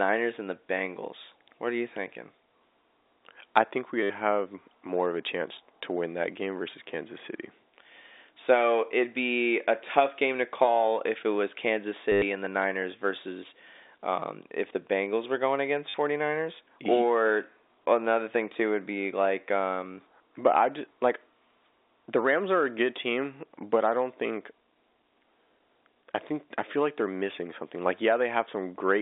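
Right after "I think", at 4.03 to 4.10 s, there's a packet loss with the last packet repeated. About 70 ms went missing before "have more of a", and the receiver looped its final packet to fill it. The same thing happens at 12.12 to 12.22 s (100 ms, just before "and the") and at 15.89 to 15.94 s (50 ms, after "were going"). Each one is a robotic stutter with a buzz near 100 Hz, which fits 10 ms packets, all over the narrow G.711 phone band.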